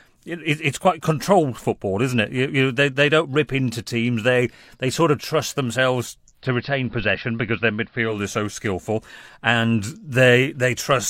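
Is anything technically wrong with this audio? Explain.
Yes. Between 6.31 and 8.21 s, after "sort of trust themselves", there's digital radio blending to analogue. A 159 ms cross-fade to AM drops about 2 dB and adds faint hiss, then it's back on digital.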